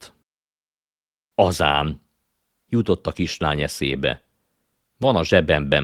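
Around 1.71 to 1.81 s, again at 3.85 to 3.91 s just after "jutott a kislány", and at 5.03 to 5.09 s, you get lost packets rebuilt from error correction: no gaps, but rougher, noisier speech for about 40 to 60 ms, likely two or three packets each time.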